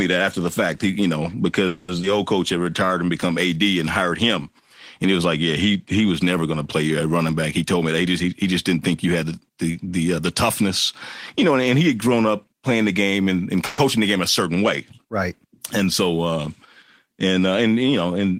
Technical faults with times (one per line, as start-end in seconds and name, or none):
1.67-1.90 call audio freeze
2.02-2.05 skip ahead
2.58-3.55 jitter buffer slow-down
7.63-10.06 jitter buffer speed-up
13.66-13.80 call audio freeze